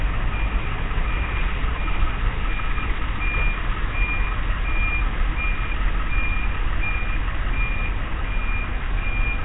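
From start to finish the audio carries heavy Nellymoser compression damage, likely from the old Flash-era Nellymoser Asao codec squeezing it into a low bitrate of around 16 kbps. Everything above 3.8 kHz is simply gone, so the top end sounds dull. Quieter bands get no real data and are replaced with noise, which leaves a rough, hissy fizz around the sound and a smeared, watery quality throughout.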